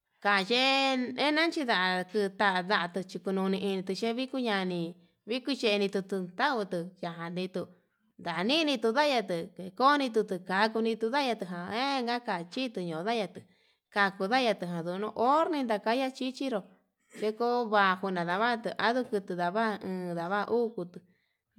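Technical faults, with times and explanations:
Nothing stood out on careful listening to this speech recording.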